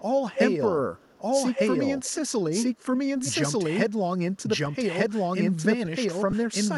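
Right from the start there's a doubled audio track: a second full copy of the speech trails about a second behind at roughly the same level, likely from a slower capture path or an out-of-step edit. On top of that, echo leak pops up at 0.32–0.39, 0.96–1.19, 1.55–1.77, 2.04–2.15, 2.61–2.97 and 3.15–3.32 s. Those are delayed scraps about 0.24 s late, some nearly as loud as the speech and others faint, likely from a far-end speakerphone whose echo canceller let some through. Then at 6.31–6.33 s there's a lost LE Audio frames dropout of 22.5 ms, which fits three LC3 frames. The decoder fills the gap with a short noisy smear.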